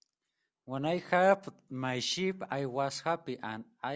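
No technical faults can be heard anywhere in the speech.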